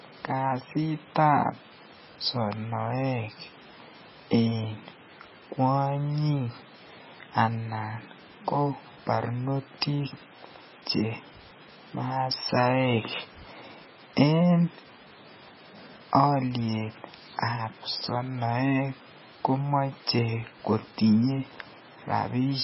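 Speech running the whole way with heavy MP3 compression, likely from a very low bitrate around 16 kbps: nothing survives above 5.6 kHz, and the watery, swirling chirps on s sounds set it apart from a plain low-pass filter, which would dull the top without that flicker.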